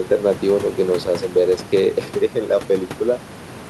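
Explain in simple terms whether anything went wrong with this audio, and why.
Nothing went wrong with this speech recording; the faint noise of the room in the background is just part of where it was recorded, sitting well below the talking, and not a problem with the equipment.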